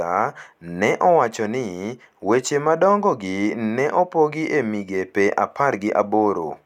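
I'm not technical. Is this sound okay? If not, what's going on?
Yes, nothing stood out as a problem when listening to this speech recording.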